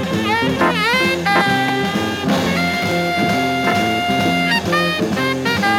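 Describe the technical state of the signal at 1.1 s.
At 1.1 s the signal is intact, with no dropout, clipping, glitch or other audible fault at that moment.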